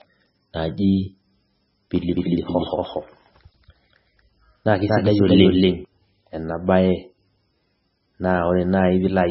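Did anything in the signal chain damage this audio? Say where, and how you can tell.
Yes, two problems. The codec stage damaged the whole clip: nothing comes through above 5.6 kHz, and the speech sounds heavily watery and swirly. That's likely MP3 compression starved of bits, consistent with roughly 17 kbps, cutting the treble and flickering weak frequency content.

Then there's a doubled audio track from 2.15 to 5.85 s. A second full-band copy trails about a fifth of a second behind, at roughly the same level, with no room tail, and cuts in and out abruptly. That's likely an edit or capture path stacking two out-of-step copies.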